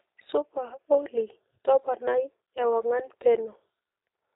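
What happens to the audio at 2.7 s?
At 2.7 s the speech carries G.729 codec damage, present throughout the clip. The voice is rebuilt from a vocal-tract filter and a few excitation pulses per frame, which fits an 8 kbit/s codec, leaving it rough and synthetic, with nothing above 3.8 kHz. Plain low-pass filtering would only dull the sound, not add this buzzy, artificial texture.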